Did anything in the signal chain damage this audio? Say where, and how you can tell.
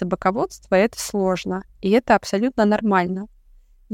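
Yes: a steady low 50 Hz mains hum, well below the speech, runs from 0.0 to 1.9 s, pointing to a ground loop or transformer coupling in the analogue wiring.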